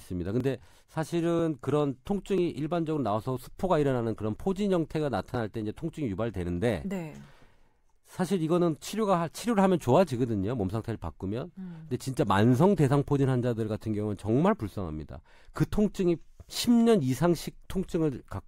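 At 0.40 s and again at 2.38 s there is a tiny skip, caused by an overlap between stream segments. The player trimmed a few milliseconds of real audio where segment timestamps collided, so the waveform jumps abruptly, which fits segments about 1 s long.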